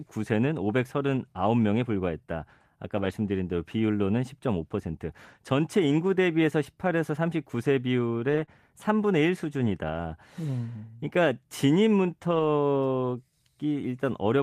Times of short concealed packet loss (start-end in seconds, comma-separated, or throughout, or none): 8.45-8.49